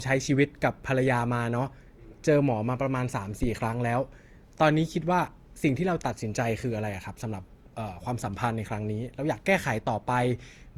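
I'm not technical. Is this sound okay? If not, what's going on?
No. Two things went wrong.

Throughout the clip there is what sounds like generation loss. The recording was likely compressed, played back and compressed again, about three times over. Each round throws away slightly different detail and adds its own small errors, and these pile up. The result is speech that sounds swirly and hollow, as if heard through a tube, with the starts of sounds smeared rather than crisp.

At about 3.43 to 3.51 seconds there is a phantom power thump. The power feeding the microphone was switched on or off while it was live, and that sudden jump in voltage passed straight into the recording. You hear it as a short, deep thud that dies away very quickly, over a few hundredths of a second.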